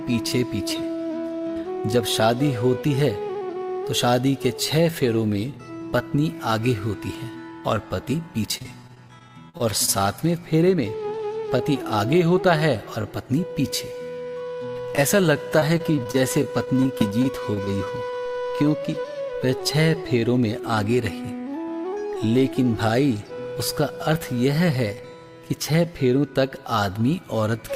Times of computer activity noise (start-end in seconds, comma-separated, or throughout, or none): none